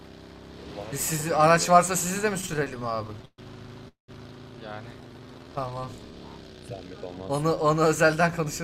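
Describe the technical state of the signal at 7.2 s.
At 7.2 s the signal is intact, with no audible fault at that moment.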